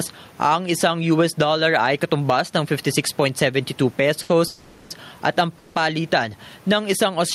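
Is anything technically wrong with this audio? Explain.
Yes. There are three kinds of fault in this speech clip.

Gain pumping runs throughout. The gain swings by roughly 10 dB, so loud and quiet passages sit unnaturally close in level and the speech sounds squashed. The likely cause is input gain set far too high for the microphone, with a fast limiter or compressor clamping down on every peak and releasing in the gaps. The room noise sits about 37 dB below the speech.

There is a short stall from a late packet at 4.22 to 4.31 s, just before "at ang". A packet missed its playout deadline and the jitter buffer ran dry, so the receiver held the last sound for about 70 ms until the data arrived. Playback then resumed from the same point. Nothing is lost, but the sound is stretched, with a faint buzzy or dipped quality, and everything after it runs about 70 ms late.

A call audio freeze occurs at 4.47 to 4.92 s, also just before "at ang", and again at 5.58 to 5.77 s, just after it. 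In each case the receiver extended the last sound as a fading buzz or hiss for about 430 ms and 170 ms respectively, without falling to full silence. Audio then picked up where it stopped, so gaps are inserted but no speech is dropped. The likely cause is packets held up in the network, long enough to empty the jitter buffer.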